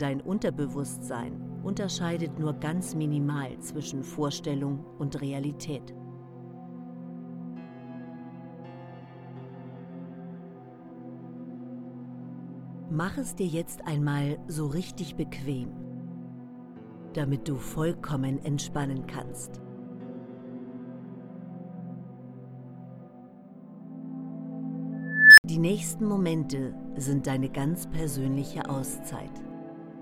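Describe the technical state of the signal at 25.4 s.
An unstable filter runs from 24.93 to 25.44 s: a tone around 2 kHz swells for 0.45 s until it clips, then cuts to 64 ms of silence, unlike feedback howl.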